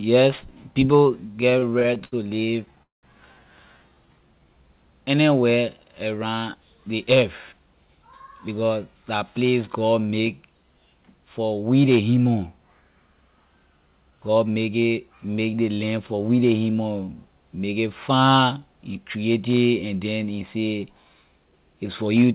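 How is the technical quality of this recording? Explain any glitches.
The recording has several jitter buffer glitches in the first few seconds and a few speed-ups later. It all comes through a call path that's band-limited with nothing above 4 kHz, which fits a G.711 A-law link at 64 kbps.

From 1.36 to 2.79 s there are repeated stalls (stutter): packets kept arriving late, so the buffer ran dry about seventeen times. Each gap was patched by stretching the last sound, with the longest about 74 ms. The speech drags and catches, though nothing is lost.

Right after, from 2.83 to 3.05 s, comes a call audio freeze of about 200 ms. The likely cause is packets held up in transit. The last sound carries on briefly, then about 160 ms is near-silent before speech resumes where it left off.

From 3.77 to 4.63 s, just before "anywhere around", there's a jitter buffer slow-down. The receiver repeated pitch periods to rebuild its reserve, adding 140 ms. 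The speech plays at 85% speed with unchanged pitch, sounding drawn out.

Jitter buffer speed-up happens three times, as the receiver trims pitch periods to cut excess delay. Pitch stays put but the speech sounds hurried. From 6.55 to 8.77 s, between "anywhere around" and "la place god make", it runs at 107%, losing around a seventh of a second. At 14.10 to 14.46 s it runs at 112%. From 21.44 to 22.24 s, after "and then he say", it runs at 109%.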